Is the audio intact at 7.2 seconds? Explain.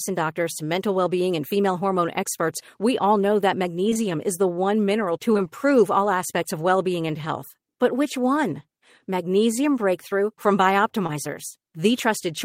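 Yes, the speech at 7.2 seconds plays through intact, with no dropout, glitch or other fault audible at that moment.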